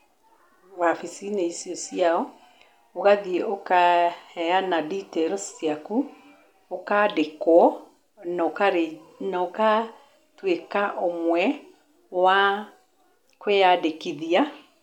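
At 7.62 to 7.64 s, the speech breaks into a brief glitch lasting about 26 ms. This is damaged data in a compressed stream. Corrupted bytes made the decoder misread its frames and lose sync. It then searched for the next valid frame header.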